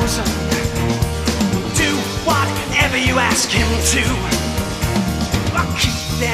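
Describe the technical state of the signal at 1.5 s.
At 1.5 s the signal is intact, with no audible technical fault at that moment.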